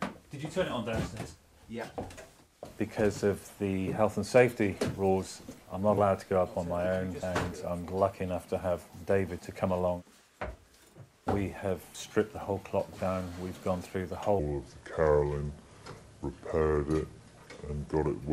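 At 5.94 to 5.98 s a brief glitch cuts through the sound. This is damaged data in a compressed stream: part of the encoded file was corrupted, so the decoder misread those frames, lost sync and jumped to the next valid frame header. It is heard as a short chirp, click or hole, all within about 40 ms.

From 14.39 s to the end of the clip, the sound slows to 0.767 times its original speed and drops roughly five semitones in pitch, so everything turns deep and sluggish at the same moment. This is a section at the wrong speed, likely caused by that stretch being played or edited against the wrong clock. Tempo and pitch fall together, which separates it from a pitch-shift effect (which keeps the timing) and from time-stretching (which keeps the pitch).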